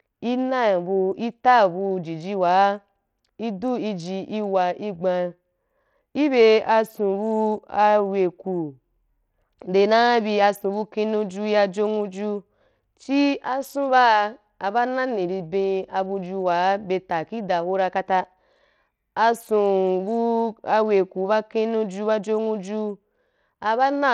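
Throughout the speech, the treble flickers in and out over a gritty, coarse texture, likely from Bluetooth SBC compression at a starved bit pool, which fits roughly 80 kbps. On a spectrogram the upper sub-bands appear as blotchy, intermittent blocks with gaps.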